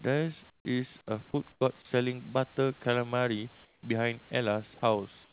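At 0.5 to 0.65 s, 1.52 to 1.61 s, 3.65 to 3.83 s and 5.24 to 5.32 s, pauses turn to flat, featureless hiss, about 6 to 12 dB quieter: likely comfort noise in place of the background after discontinuous transmission. Spectrograms show smooth, uniform gaps; waveforms show sudden low, even stretches.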